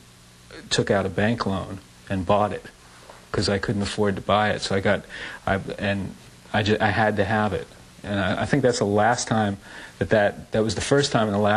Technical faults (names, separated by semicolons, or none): none